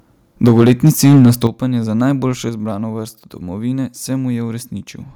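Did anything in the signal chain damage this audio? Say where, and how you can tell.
Yes. From 0.44 to 1.47 s the sound shows microphone overload, most likely at the converter stage: the input was driven about 8 dB past full scale, so the peaks ran into the converter's ceiling and were sliced flat. Roughly a tenth of the waveform in that stretch is clipped. The louder syllables take on a harsh, crackling edge, and the distortion stops just before "za najboljšo izbrano vrsto".

The microphone volume stepped down twice, a likely sign of the call processing's automatic gain control reacting to the overload by lowering the device's input level. The first step is small, about 2 dB at 0.48 s, just after the distortion begins. The second, about 8 dB at 1.47 s, lands right as the clipping ends, before "za najboljšo izbrano vrsto". Voice and background fall together abruptly rather than fading.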